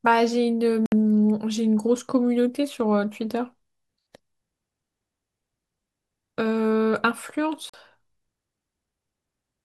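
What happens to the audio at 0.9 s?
The speech cuts out from 0.86 to 0.92 s, a gap of about 61 ms with abrupt edges or a brief fade, and then picks up further along as if it had kept playing. That's most likely a Bluetooth dropout: a few packets didn't reach the headphones in time and were discarded.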